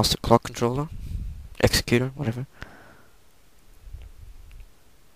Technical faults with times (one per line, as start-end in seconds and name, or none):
none